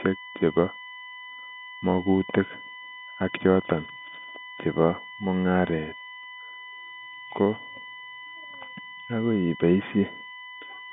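From start to finish, a steady USB whine sits under the speech: a fixed tone at 1 kHz, strongest at its 2 kHz harmonic, roughly 20 dB below the signal. It comes from USB's 1 ms frame timing leaking through power or ground. Unlike mains hum, it is high-pitched, and it survives the narrow telephone band intact.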